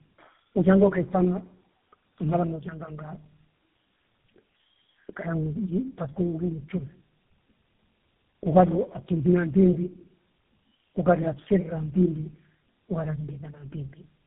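Throughout, tandem speech coding passed the call through what sounds like three low-rate codecs, each worsening the last, leaving rough, muffled, warbly speech with nothing above 3.8 kHz.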